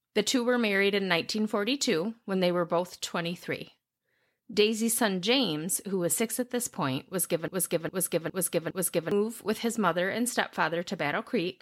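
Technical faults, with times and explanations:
7.48–9.11 s, broken-record loop: playback likely stalled and resent its last 0.41 s fragment four times back to back, so the speech due there is lost.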